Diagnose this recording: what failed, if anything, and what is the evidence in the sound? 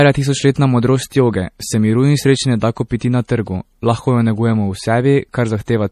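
MP3 compression runs through the whole speech clip, a codec-stage fault. Nothing is present above 14.5 kHz, and the plainly audible watery swirl fits a low bitrate of around 40 kbps. Likely the encoder, starved of bits, cut the treble and let weak spectral lines flicker between frames.

Pre-echo, also from the codec, appears from 2.99 to 3.01 s, after "in sreče ne da" and before "na trgu lahko ju", and again at 3.28 s, just before "trgu lahko ju negujemo". Quantisation noise spread across each block leaks a brief hiss ahead of the attack and softens it.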